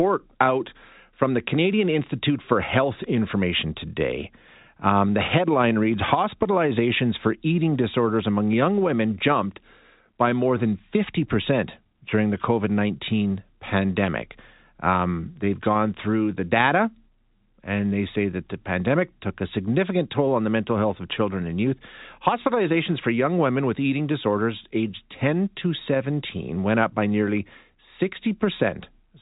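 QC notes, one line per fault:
No faults heard; telephone-band speech, nothing above 3.8 kHz.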